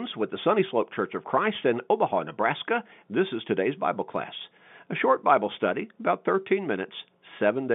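No technical faults occur anywhere in this speech recording.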